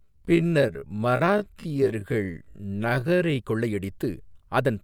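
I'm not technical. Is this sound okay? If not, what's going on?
No. There's a time-stretched section from the start to 3.38 s: the speech plays at half speed but keeps its normal pitch, so it drags. It was likely slowed by software repeating tiny slices of sound, and the normal pace returns abruptly at "கொள்ளையடித்து அதன்".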